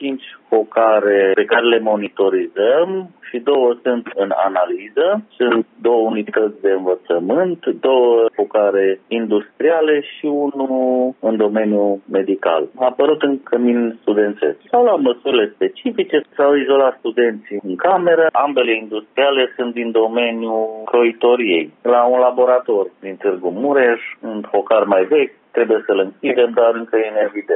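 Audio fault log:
No faults detected.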